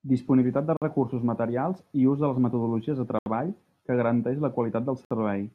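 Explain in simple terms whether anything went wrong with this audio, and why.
The speech drops to dead silence three times, each gap lasting only a few hundredths of a second: from 0.77 to 0.82 s, just before "recursos materials i ús", from 3.19 to 3.26 s, and from 5.05 to 5.11 s. This is likely a Bluetooth stall: radio interference delayed the data, the headphones used up their small reserve of audio, and playback paused until the missing data arrived.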